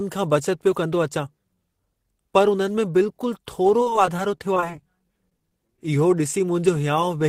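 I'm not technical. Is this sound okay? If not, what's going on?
No. From about 3.8 to 5.79 seconds, just after "में बिल्कुल", the speech breaks up. This is repeated packet loss, which gives a robotic sound. Small pieces of the audio went missing in transit, one after another. There are many tiny holes, each no longer than about 22 milliseconds. The system fills each hole by stretching the sound just before it. That patching covers roughly an eighth of this stretch. The result is choppy and machine-like.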